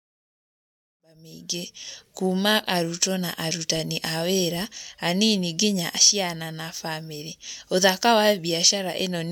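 Nothing here needs fixing: the speech just rises in a gentle editor's fade-in from around 1 s, reaching full level by 2.14 s, and carries on without anything going wrong.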